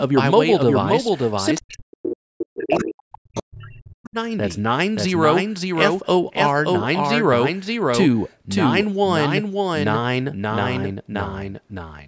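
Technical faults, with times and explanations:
Throughout: doubled audio track. The speech was likely captured a second time by a slower path, or an edit left two copies out of step, so a second full-band copy trails the original by about half a second at roughly 5 dB lower. Because that copy carries no decay or room colour, it sounds like a flat, dry repeat of every syllable rather than a reverberant echo.
1.55–1.61 s, 2.03–2.16 s, 2.38–2.45 s, 2.72–3.14 s and 3.35–3.42 s: other side's voice leaking through. The far end, played on the talker's loudspeaker, was likely not fully removed by the echo canceller, so scraps of a second voice reach the microphone. They sit about 15 dB below the main speech in most bursts, about 10 dB at 2.38 s and only about 5 dB at the longest stretch from 2.72 s, where it is most noticeable.
1.6–4.15 s: speech suppressed in double talk. With both sides talking at once, the echo canceller likely could not separate its own talker from the loudspeaker echo and turned everything down. 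The main voice dips, at worst by about 40 dB, so it is effectively cut out. Around 2 s of this span is affected, overlapping the leaked bursts above, within a band that carries nothing above 8 kHz.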